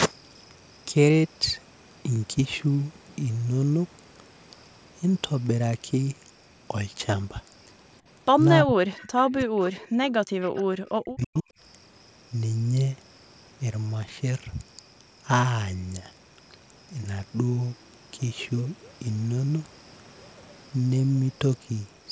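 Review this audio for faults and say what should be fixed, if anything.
The voice sinks by up to about 40 dB or briefly vanishes at 8.64–8.86, 9.28–10.24 and 10.96–11.49 s. This is likely speech suppressed in double talk, with the canceller turning down both its own talker and the loudspeaker echo while both sides spoke.

A faint copy of the voice trails 322 ms behind, about 20 to 25 dB down, at 8.97, 9.82–9.88, 10.48–10.63 and 11.22–11.42 s. This is likely echo leak from loudspeaker pickup that was not fully cancelled.

A headset on the far end, or an echo canceller with better double-talk detection and a longer tail, would prevent both.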